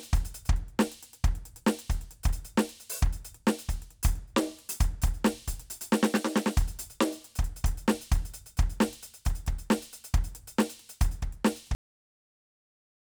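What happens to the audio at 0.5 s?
Nothing goes wrong at 0.5 s; the music plays through that moment intact, with no dropout, click or distortion.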